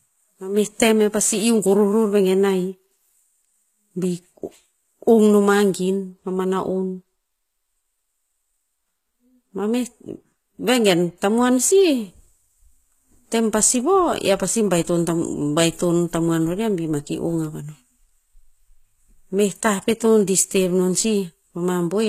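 Throughout the speech, the s sounds come out gritty and metallic, with treble that is not quite natural and nothing above 14.9 kHz. This is likely HE-AAC compression, its rebuilt upper band mismatched to the coded lows, fitting roughly 20 kbps.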